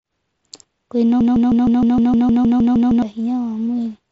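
From 1.21 to 3.02 s, a 155 ms fragment of speech repeats back to back twelve times: a broken-record loop, likely a stalled stream resending its last buffer.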